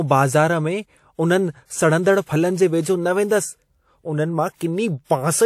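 Pre-echo appears at 4.56 to 4.61 s, where a short wash of hiss creeps in about 48 ms ahead of a sharp attack in the speech. The transform codec spread its quantisation noise across the whole block, and because the attack sat late in that block, noise sized for the loud onset spilled into the quiet moment before it. The result is a short smear leading into the sound, and the attack itself lands softer and less crisp.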